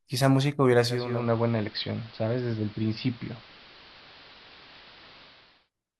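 From 0.82 s the speech turns dull and hissy over about half a second, losing treble and dropping about 2 dB, with hiss some 20 dB down. This is digital radio blending to analogue AM, holding until 5.70 s.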